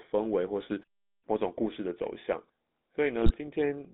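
Throughout, the audio has passed through the GSM full-rate codec, which fits a 13 kbps coder. It models the vocal tract with sparse pulse excitation, leaving band-limited speech from 200 Hz to 3.7 kHz with plainly audible buzzy, gravelly roughness.

From 0.80 to 1.11 s, new audio likely arrived too seldom, causing robotic sound from repeated short buffers. Stretches around 10 ms repeat in place of about half the real audio, laying a rigid metallic buzz at 100 Hz over the speech.

From 3.23 to 3.34 s, GSM bit errors reach the decoder, which fits a bit error rate near 2.6 percent across about six frames. Corrupted filter, pitch or gain values turn the speech into squawks, pops and gargling.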